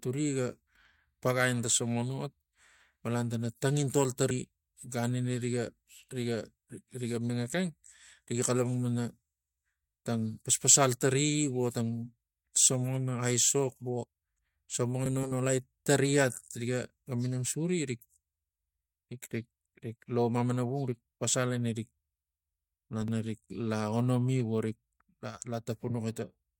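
At 7.30 s, just before "ekeng riga", then at 15.06 to 15.32 s and 23.00 to 23.08 s, compressed frames skipped make the speech jump ahead by roughly 100 to 150 ms. Unlike a dropout, no silent gap is left.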